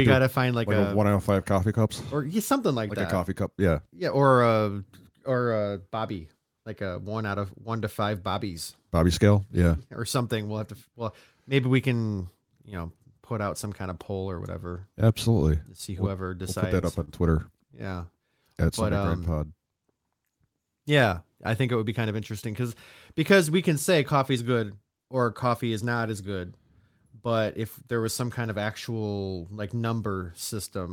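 Right after "see whoever we'll", from 16.43 to 17.09 s, the speech shows repeated stalls (stutter). Packets kept arriving behind the playout clock, so the jitter buffer emptied four times. Each time the receiver stretched the last sound to bridge the wait, about 60 ms in total and none longer than 28 ms, and nothing was lost. It sounds like small hitches in the flow. On a spectrogram, brief frozen patches repeat the preceding frame's harmonic pattern.

From 18.40 to 19.47 s a jitter buffer slow-down follows. The buffer was running low, so the receiver rebuilt its reserve by repeating single pitch periods, adding 91 ms and playing the passage at 92% speed with unchanged pitch. The sound is slightly drawn out, with stretched vowels. In the waveform, identical cycles recur back to back. The spectrogram shows harmonics held flat slightly longer than the surrounding speech.

Between 21.60 and 22.21 s, just before "because because we can", a jitter buffer speed-up does the opposite. 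With more audio queued than the buffer's target, the receiver cut out short pitch-period pieces, around 70 ms in all, so this stretch runs at about 110% speed at the same pitch and sounds hurried. In the waveform, cycles join directly where pieces were cut out. The spectrogram shows syllables and formant transitions squeezed closer together.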